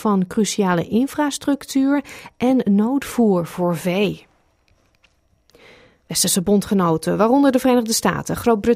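No technical faults are audible.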